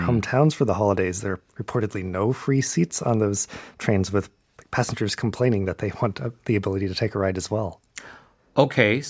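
Nothing stood out as a technical problem on listening to this speech recording.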